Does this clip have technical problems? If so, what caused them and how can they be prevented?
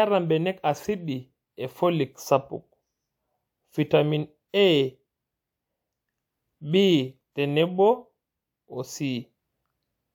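No, this speech clip has no technical problems.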